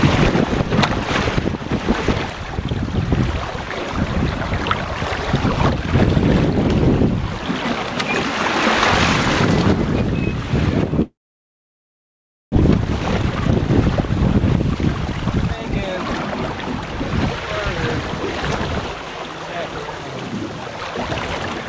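The audio has passed through a call codec, with nothing above 8 kHz, which fits a G.722 wideband path. From 11.02 to 12.58 s the sound trails off as a brief fading buzz and then about 1.4 s of silence, likely a long network dropout. Unlike a short packet loss, about a second of material never returns. From 12.61 to 15.13 s a jitter buffer speed-up plays the audio at 120% speed, trimming roughly half a second. The pitch stays the same, which sets it apart from resampling, where the pitch would rise.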